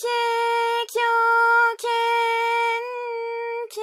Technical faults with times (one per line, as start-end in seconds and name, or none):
none